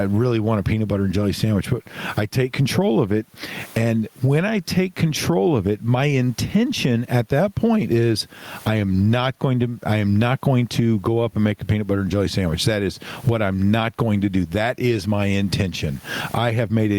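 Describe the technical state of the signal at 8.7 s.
At 8.7 s the signal shows gain pumping, present throughout the clip. The gain swings by around 20 dB, pulled down under each loud syllable, which compresses the speech. The likely cause is excessive input gain with a fast limiter clamping it.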